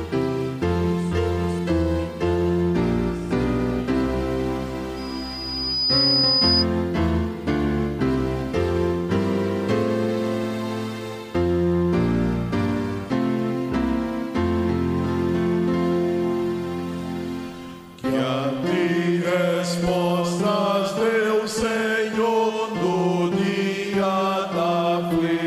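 Loudspeaker feedback squeal runs from 4.96 to 6.66 s: a single pure tone at 5 kHz swells up over roughly a second and then holds, ending up about 5 dB above the rest of the sound. A microphone was picking up the loudspeaker it was feeding, and at 5 kHz the trip round that loop came back louder than it went out. The tone kept feeding itself until it ended at 6.66 s.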